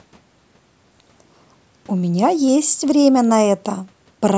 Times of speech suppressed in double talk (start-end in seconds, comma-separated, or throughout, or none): none